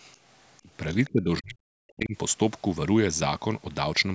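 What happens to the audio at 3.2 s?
At 3.2 s the speech carries on intact, with no dropout, click or distortion, only the normal trimming of the lowest bass and the upper limit near 8 kHz that come from the call's microphone processing.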